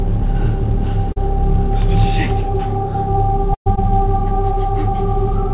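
At 1.12 to 1.18 s there is a short concealed packet loss. About 40 ms of audio never arrived in time, and the receiver bridged the hole by extending the preceding sound before blending back in. It is heard as a brief smear in the band-limited, nothing-above-4-kHz audio of the call path.

At 3.54 to 3.68 s a burst of packet loss removes about 120 ms. Concealment briefly carries the last sound forward and fades it out, leaving about 90 ms of silence before the audio resumes further along, with that stretch missing.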